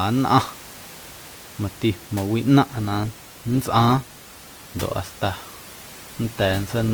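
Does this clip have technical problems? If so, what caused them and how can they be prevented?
Yes. From 2.66 s to the end, the speech switches abruptly, with no gap, to an adaptive stream at a lower bitrate. The top end still extends to about 20.1 kHz, but coding artefacts become audible. This points to a drop from Opus at about 64 kbit/s to about 16 kbit/s after the connection slowed. The room noise, about 20 dB below the speech, is part of the recording itself. To prevent the switch, give the stream enough bandwidth headroom or raise the minimum bitrate the player is allowed to select.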